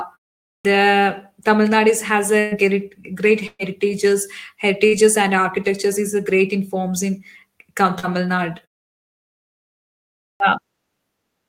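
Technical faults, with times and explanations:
0.59–0.65 s and 10.35–10.40 s, clipped start after a pause. After silences of 0.5 s and 1.77 s, the output wakes late. The first 57 ms and 52 ms are lost. Speech starts abruptly.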